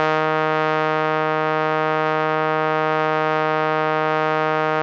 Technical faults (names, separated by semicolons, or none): none